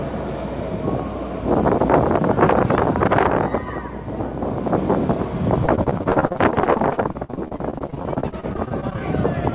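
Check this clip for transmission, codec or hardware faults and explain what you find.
There is one fault: mains hum, present for the whole clip. A ground loop or nearby transformer is leaking the power line into the signal. It sounds like a steady 60 Hz drone with low harmonics, roughly 20 dB below the sound. The call path's cutoff at 4 kHz is expected and fits a G.711 narrowband codec.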